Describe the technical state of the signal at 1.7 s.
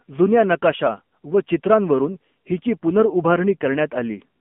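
At 1.7 s the speech sounds thin, buzzy and synthetic, with everything above 3.4 kHz and below 200 Hz gone. This is the AMR narrowband mobile codec, present throughout, rebuilding the voice from a vocal-tract model and sparse pulses, which fits a low rate near 7.4 kbps.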